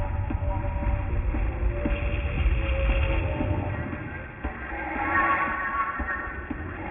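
From start to finish the audio carries wrong, unrelated tones mixed into its upper range, with the spectrum running right up to a hard edge at 3 kHz. This is aliasing: the material was brought down to a lower sample rate, which fits a 6 kHz rate, without first removing content above 3 kHz. That content folded back below the edge and sits roughly 15 dB under the wanted sound.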